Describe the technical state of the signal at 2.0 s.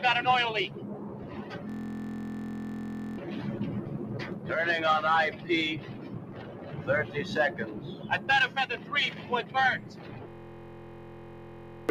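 At 2.0 s the sound is caught in a system hang loop, from 1.70 to 3.18 s. One 23.2 ms slice repeats, buzzing at 43.1 Hz, which fits a 1024-sample buffer.

A noise suppressor applied to music or sounds is also active. It treats sustained sound as noise, so levels pump and tails sink, swinging about 15 dB.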